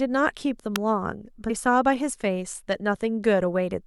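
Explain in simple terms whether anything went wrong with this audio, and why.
At 0.76 s there's a sharp little snap sitting on top of the speech. That's an electrical switching spike, most likely from a nearby switch, motor or static discharge arcing for an instant and getting picked up by the audio line.

Then, between 1.49 and 1.51 s, the speech jumps ahead by around 150 ms. That's compressed frames skipped: a handful of coded chunks, about seven at 23.2 ms each by the sound of it, never got played, so the speech skips forward at that point.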